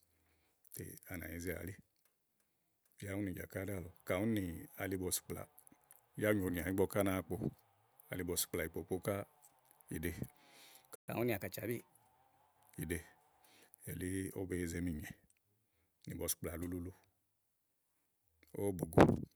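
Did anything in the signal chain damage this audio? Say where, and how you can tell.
Yes. In the playback stage, the player likely ran short of buffered data or had its output thread blocked, causing a playback stall. The speech drops to silence from 10.95 to 11.08 s, a gap of 123 ms, before sound returns.

The player then resampled its backlog to win back the lost time, which is catch-up at higher speed. From 11.08 to 11.90 s the speech runs 1.15 times faster and sits roughly two semitones higher, then both speed and pitch return to normal.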